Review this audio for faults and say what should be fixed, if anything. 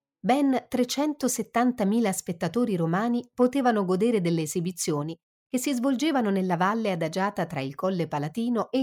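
Nothing stood out on listening, so there is nothing here that needs fixing.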